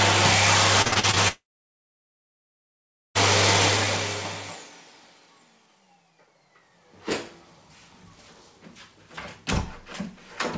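From 0.82 to 1.18 s the audio turns choppy. This is repeated packet loss, heard as a robotic sound. Six short holes fall in that stretch, the longest about 43 ms. Each one is patched by stretching the last bit of sound. Nearly half of the span is concealed this way. The patches come too close together, so the result stutters with pieces missing.

At 1.28 s the sound breaks off. A brief fading buzz carries on where it stopped. Then comes silence, lasting roughly 1.75 s. Audio returns at 3.17 s, and nothing from the gap is ever played. This is likely a long network dropout, where nothing arrived for almost two seconds. The patch-over fades quickly because the receiver stops continuing the last sound once the gap runs long. The call path's bandwidth limit shows too, with no content above 8 kHz, which fits G.722 at 64 kbps.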